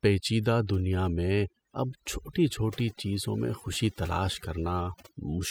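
From start to finish, the recording suffers from overdone noise removal. A noise reduction stage was pushed far too hard, so any frequency band that came close to its noise estimate was pulled right down or shut off, and the quieter parts of the speech were cut along with the noise. The gaps between phrases fall to near silence scattered with twinkling specks.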